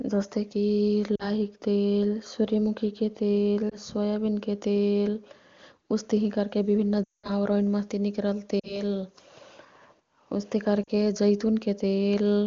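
Lost AMR speech frames at 1.15–1.28, 3.69–3.75, 7.04–7.31, 8.59–8.82 and 10.84–10.91 s. Frames that failed their checksum were replaced by repeating the last good pitch and vocal tract settings at falling gain. The short gaps (20–40 ms) give brief dips or warbles. The 200 ms run at 7.04 s drops to near silence within two frames before the speech returns roughly. Between these dropouts the wideband speech is clear, which fits the top AMR-WB rate.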